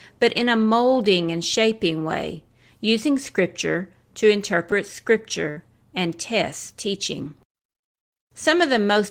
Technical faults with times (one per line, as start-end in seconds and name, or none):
5.50-5.59 burst of packet loss